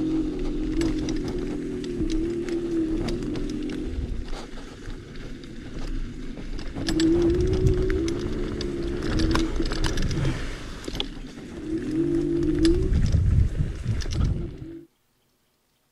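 No technical faults can be heard anywhere in this audio.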